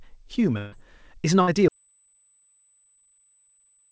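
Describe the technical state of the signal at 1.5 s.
Right around there you hit a burst of packet loss, from 1.42 to 1.49 s. A run of packets never made it in time, so the receiver stretched the last sound for about 53 ms while fading it down. When the audio picks back up, roughly 60 ms of speech is simply gone.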